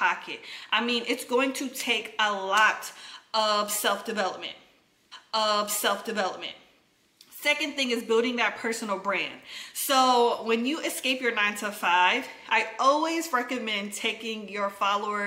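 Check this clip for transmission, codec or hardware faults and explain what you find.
One transmission fault appears. From 5.11 to 7.11 s, a stream segment is repeated: the player queued the same chunk twice, so about 2.0 s of audio replays after a small blip at the jump back.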